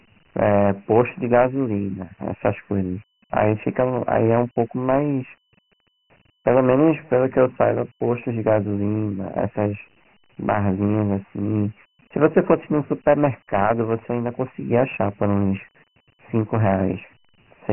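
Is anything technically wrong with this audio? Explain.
Yes. Throughout the speech the sound is thin and gritty, with a rough hiss that rises and falls with the speech itself, and nothing is present above 3 kHz. This is Dialogic VOX ADPCM coding, with heavy damage. Each sample is stored as a 4-bit step relative to a predicted value, so the coarse quantisation error becomes that speech-following grit. The 3 kHz ceiling points to a 6,000-samples-per-second rate, which fits a 24 kbps stream.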